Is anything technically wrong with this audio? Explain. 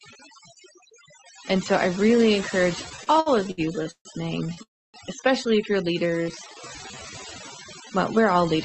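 Yes, there are five distinct faults in this speech clip.

Overdone noise removal runs through the whole clip. A noise reduction stage set too aggressively treats any frequency band that sits near its noise estimate as noise and pushes it far down or out. The quieter parts of the speech go along with the background, which collapses into near silence dotted with twinkling specks.

Repeated stalls (stutter) run from 2.89 to 4.08 s. Packets kept arriving late, so the jitter buffer emptied about ten times. Each time the receiver kept extending the last sound until the stream could resume. Roughly 0.38 s of filler went into that stretch, about a third of it, with the longest hold near 143 ms. Nothing is lost, but the speech drags and stutters.

A short stall from a late packet follows at 4.54 to 4.60 s. One packet missed its playout slot and the buffer briefly ran dry. The receiver stretched the preceding sound by about 23 ms, then carried on from the same point. 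The result is a momentarily held sound with a faint buzz or dip, and no content missing.

A call audio freeze comes right after, from 4.63 to 4.97 s. The extended sound fades out and then about 280 ms of near silence sits in the middle of the speech before it picks up exactly where it left off. That is a gap of about 0.31 s. This is likely a jitter buffer running empty while packets were held up in transit, with the receiver filling the wait.

A jitter buffer slow-down affects 6.00 to 7.11 s. Needing to rebuild its reserve, the buffer repeated single pitch periods and slivers of pause many times over. This added about 143 ms, so the passage plays at roughly 88 percent speed with unchanged pitch. Sounds are drawn out.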